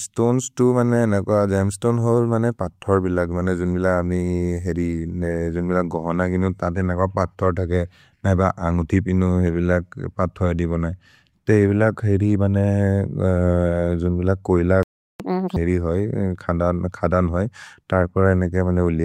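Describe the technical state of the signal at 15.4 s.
At 15.4 s the player is in a catch-up at higher speed, running from 15.20 to 15.56 s. After a stall, it resamples its backlog to win back lost time. The speech runs at double speed, with pitch raised by about ten semitones, then settles.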